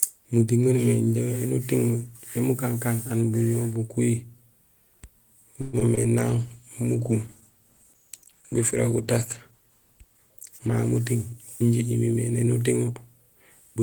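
Speech with a cluster of network faults around the 6 s mark and a long stretch of degraded coding after it. From 5.61 to 5.75 s the sound stops progressing and the last fragment is stretched into a short buzzy continuation that fades. This is likely a call audio freeze: packets stalled in transit, the jitter buffer drained, and the receiver extrapolated for about 120 ms until data arrived. Playback then resumes where it left off, so the gap is inserted rather than lost, and the delay grows by the same 120 ms. Immediately after, two short concealed packet losses appear, at 5.79 to 5.83 s and 5.95 to 5.99 s. In each, about 20 ms of audio never reached the decoder in time. The receiver bridged the hole by extending the preceding sound and cross-fading back into real audio, which is heard as a brief smear or wobble where a little material is genuinely gone. From 6.20 s to 12.77 s a call bitrate drop takes hold. 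The encoder's target falls from 32 kbps to 14 kbps and stays at the lowest rate for about 4.6 s. At that rate Opus quantises coarsely and trims the upper band, so the speech turns rough and muffled until the rate recovers near the end. Overlapping it, from 10.68 to 12.41 s, a jitter buffer speed-up runs the audio about 6% fast at unchanged pitch. The buffer had grown past its target, as happens when delayed packets arrive together. To shed the excess, the receiver cut out pitch-period-sized slices repeatedly, removing around a tenth of a second in total and making that passage sound slightly hurried.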